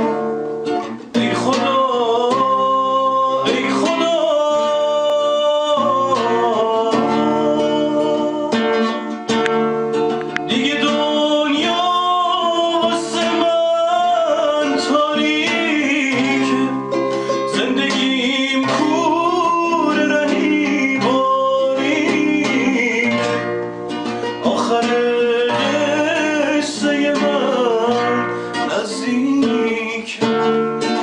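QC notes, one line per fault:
11.71 s, dropped samples: a single sharp click, heard as one thin vertical line across the whole spectrum. The likely cause is that roughly a single sample went missing from the stream, so the waveform leaps straight from one value to a later one instead of moving smoothly between them. That abrupt step carries energy at every frequency at once. The gap lasts only a tiny fraction of a millisecond, far too brief to remove any audible sound.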